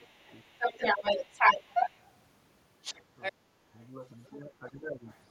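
An echo canceller that likely could not separate the talker from the loudspeaker echo during double talk produces speech suppressed in double talk at 0.0 to 0.31 s, 3.32 to 3.73 s and 4.38 to 5.05 s. The speech dips by up to about 15 dB there, and the last stretch is the longest. The same canceller likely left part of the loudspeaker signal in the microphone, so the other side's voice leaks through. From 0.18 to 2.16 s it sits roughly 10 dB above the speech, and from 2.82 to 3.33 s it is about as loud as the speech. It comes back faint, far below the speech, from 3.68 to 4.36 s and from 5.07 to 5.2 s.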